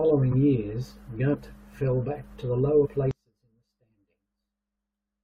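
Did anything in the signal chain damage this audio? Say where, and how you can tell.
Yes. At the codec or storage stage, whole compressed frames went missing: at 0.29–0.34 s, 1.33 s and 2.85–2.87 s the sound jumps forward by roughly 20 ms, 70 ms and 40 ms.

From 3.11 s to the end, the summed level falls by about 35 dB, leaving only a faint residue of the speech. That collapse points to one channel inverted, likely from a polarity swap in the wiring, so the common centre content cancels in mono.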